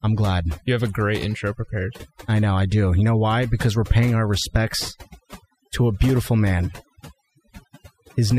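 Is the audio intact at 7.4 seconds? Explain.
No. Overdone noise removal affects 7.4 seconds, as it does the whole clip. The noise reduction was set so aggressively that frequency bands near its noise estimate are cut away along with quiet speech detail, leaving near-silent gaps flecked with twinkling specks.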